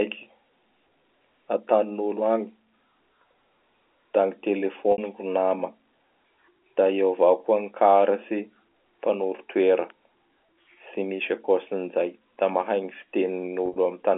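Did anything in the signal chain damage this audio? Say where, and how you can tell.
Yes, packet loss with pitch repetition at 4.92 to 4.98 s and 13.66 to 13.76 s, at the network stage. The receiver bridged about 60 ms, then 70 ms scattered over 100 ms, by repeating the last pitch period, heard as brief buzzy held tones over the 300 to 3400 Hz G.711 telephone band.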